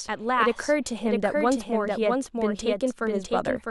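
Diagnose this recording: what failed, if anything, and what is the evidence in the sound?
Throughout the speech, a full-band second copy trails the original by roughly 0.7 s at around 5 dB lower, with no decay or room colour. That's a doubled audio track, likely from a second, slower capture path or an edit stacking two out-of-step copies.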